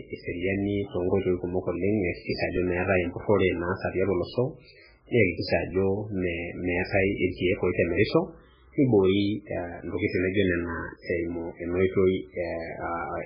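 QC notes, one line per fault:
throughout: MP3 compression, likely. Heavy watery, swirly damage and nothing above 5.3 kHz, which fits a very low bitrate around 8 kbps starving weak frequency lines.
2.22–2.27 s: pre-echo. About 49 ms of hiss creeps in ahead of an attack, because block-spread quantisation noise fills the quiet gap, so the onset sounds smeared.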